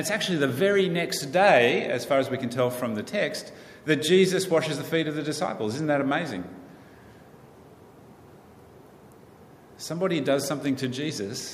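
No technical faults can be heard anywhere in the recording.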